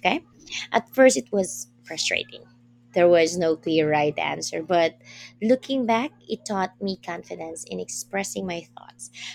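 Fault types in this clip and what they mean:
Dropped samples: two sharp clicks in the speech, at 3.27 s and 6.95 s, each a thin vertical line across the spectrum. They are likely caused by a tiny run of samples, a fraction of a millisecond, going missing, so the waveform jumps abruptly without removing audible sound.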